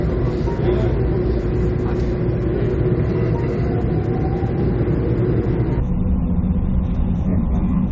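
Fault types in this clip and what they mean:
Section at the wrong speed: From 5.80 s to the end at 7.91 s, playback likely ran against the wrong clock, at 0.516 times the recorded speed. The sound there slows to roughly half pace and sinks in pitch, about ten semitones lower.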